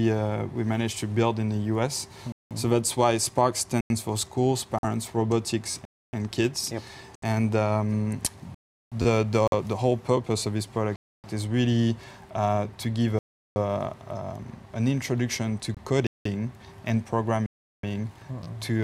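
The output buffer was likely not filled in time at 2.32 s, so a block of digital silence replaces about 186 ms of audio, consistent with an 8192-sample buffer left empty. The sound stops dead and restarts with no fade around a clear hole. The same underrun recurs at 3.81 s (93 ms, fitting a 4096-sample block).

At 4.79 to 4.85 s, audio packets likely failed to reach the headphones in time over the wireless link. This Bluetooth dropout leaves a 46 ms gap, and the sound resumes further along, as though it had kept playing through the hole.

At 5.71 s new audio arrived late and the device replayed its last 11.6 ms buffer twice more, as a 512-sample buffer would. This repeated buffer comes across as a brief buzzy stutter with hard joins between the copies.

Further blocks of digital silence fall at 5.85 s (279 ms), 8.55 s (372 ms, fitting a 16384-sample block), 10.96 s (279 ms), 13.19 s (372 ms), 16.07 s (186 ms) and 17.46 s (372 ms). 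Each of these is a hole. The longer ones sound like the audio switching off for over a third of a second.

The Bluetooth dropout returns at 7.15 to 7.24 s (70 ms), 9.48 to 9.54 s (46 ms) and 15.75 to 15.78 s (23 ms).

The repeated buffer recurs at 9.02 s, where three extra plays give a slightly longer buzz, and again at 18.44 s with two extra plays.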